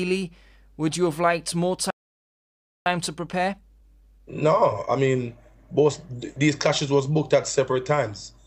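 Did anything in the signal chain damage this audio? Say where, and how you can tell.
Yes, the damage happened at the playback stage. This is a playback stall: at 1.90 s the sound cuts off mid-flow and the output goes completely silent for about 0.95 s, resuming at 2.86 s. The likely cause is a player that ran dry of buffered data or had its output thread blocked, holding back output until it recovered.

From 2.86 s to 5.86 s there is time-compressed catch-up. The audio runs about 1.1 times faster than normal but keeps its original pitch. After the stall, the player has a backlog to clear. It does this by cutting out small segments and cross-fading across the joins. The speed-up is what you hear as hurrying.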